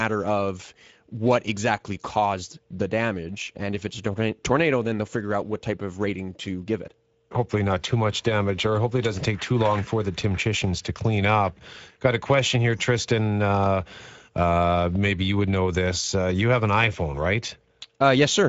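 The whole clip carries Speex codec damage, and it's plainly audible from start to finish. Speex is a CELP codec, so it rebuilds speech from a predicted vocal-tract filter plus a coded excitation. Here that excitation seems short of bits, which leaves the speech sounding noisy and a bit hoarse. The rate points to roughly 16.8 kbps wideband mode. Nothing comes through above about 7.7 kHz, and the top band sounds more like shaped noise than real detail.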